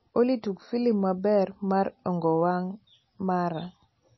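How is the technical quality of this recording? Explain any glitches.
Technically it's pretty rough, with plainly audible MP3 compression damage running through the whole speech clip. The likely cause is low-bitrate MP3 encoding, around 24 kbps by the sound of it. With so few bits the encoder chops off the treble, and there's nothing above 5.8 kHz, so the sound is dull and boxed-in. It also drops weak frequency detail that flickers in and out between frames, giving a plainly audible watery, swirly texture.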